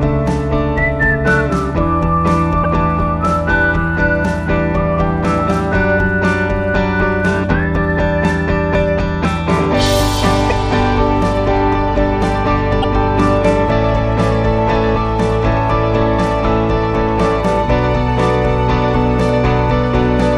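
The audio breaks up briefly at 2.63–2.66 s, 10.49–10.52 s and 12.82–12.85 s, each glitch lasting about one 26.1 ms frame, likely a broken MP3 bit reservoir. Unlike a plain dropout, the sound jumps ahead and the garbled frame borrows misplaced data.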